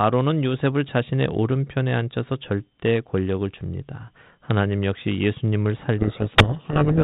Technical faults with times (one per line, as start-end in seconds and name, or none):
5.98-7.03 codec payload misread